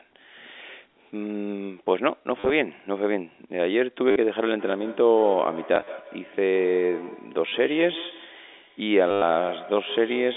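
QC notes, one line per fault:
2.4–2.5 s, 4.11–4.16 s, 5.75–5.87 s, 7.49–7.52 s, 9.11–9.22 s: packet loss with last packet repeated. Lost audio is replaced by repeats of the previous packet. The repeats buzz near 100 Hz, which points to 10 ms packets. The longest gap is 110 ms, at 9.11 s.
4.58 s to end: feedback echo between two devices. A second device in the room replays the call into the microphone. Each sound returns roughly every 150 ms, thin and ringing. The echo peaks at about 17 dB below the speech.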